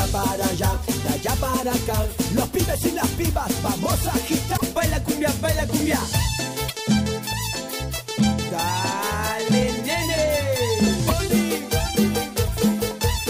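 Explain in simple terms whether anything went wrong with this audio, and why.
Damaged data in a compressed stream causes brief glitches at 4.53, 6.68 and 11.04 s: the player misreads the corrupted chunks and garbles them.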